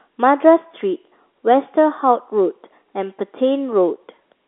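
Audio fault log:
Nothing stood out on listening; the telephone-band character of the G.711 line, with no content above about 3.8 kHz, is simply how this line sounds.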